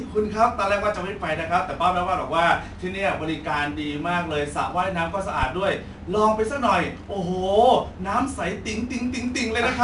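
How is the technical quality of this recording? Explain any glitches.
The quality is compromised throughout by 4-bit ADPCM compression.

Across the whole clip, each sample has been coded as a coarse 4-bit step from a running prediction, with the step size adapting as the speech changes. That quantisation error rides along with the signal, so every louder syllable carries a gritty hiss, and sharp onsets smear where the step cannot keep up. Nothing is present above 10.7 kHz, which dulls the top end and fits a low sample rate near 22 kHz, consistent with a bitrate of about 89 kbps.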